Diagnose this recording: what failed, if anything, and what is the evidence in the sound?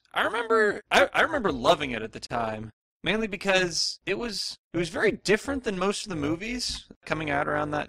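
A metallic buzz runs through the whole speech clip, with the level pumping by about 11 dB at a rate of around 200 Hz. This is overlap-add ripple from a frame-based processing stage, likely in call processing. The audio was split into windowed frames and summed back with an overlap whose windows don't add to a constant gain, so the level dips and swells once per frame, giving the metallic buzz with extra tones around the voice.

Right after "loving it at the", the sound drops out abruptly from 2.27 to 2.30 s, a gap of about 37 ms with smeared edges, and then resumes where it stopped. This is a gap at a join of encoded pieces, at the codec or storage stage. Separately encoded segments were concatenated without trimming, so the encoder's start-up delay and the padding in the final frame remain as dead air.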